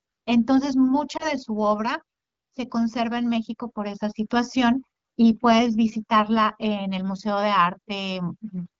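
At 1.17 to 1.32 s, a lost AMR speech frame (20 ms) is concealed from the previous frame's parameters, causing a brief dip or warble in the AMR-WB speech.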